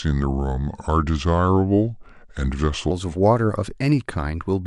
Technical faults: section at the wrong speed

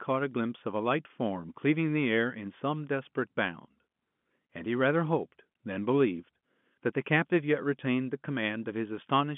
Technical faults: none

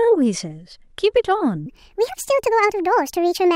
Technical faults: wrong sample rate

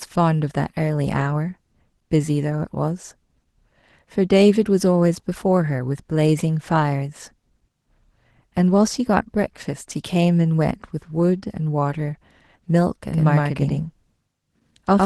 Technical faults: Opus voice compression; doubled audio track

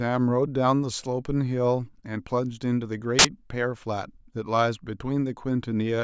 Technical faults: file tags played as audio

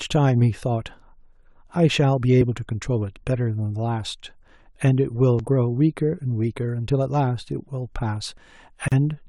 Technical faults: audio missing between chunks; gap at a join of encoded pieces

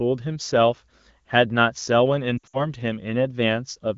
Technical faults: lost AMR speech frames

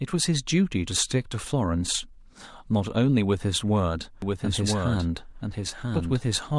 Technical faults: doubled audio track

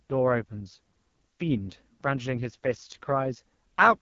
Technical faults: AMR wideband (HD Voice) codec

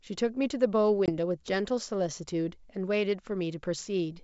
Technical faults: packet loss on an ADPCM call

